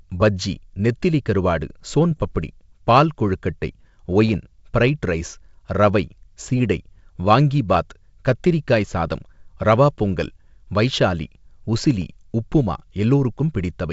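Speech over a G.722 wideband link, clear up to about 7 kHz, breaks into rough pops and brief level jumps at 2.11–2.25 s after "பஜ்ஜி நெத்திலி கருவாடு ஸோன்", at 4.27–4.35 s after "பால் கொழுக்கட்டை", at 7.74–7.77 s before "கத்திரிக்காய் சாதம் ரவா பொங்கல்", and at 12.02 s. These are bit errors on an ADPCM link. Each flipped bit throws the decoder's step size and prediction off, so the damage rings on briefly. The error rate runs from about 0.07% to 0.3% and is heaviest in the first burst.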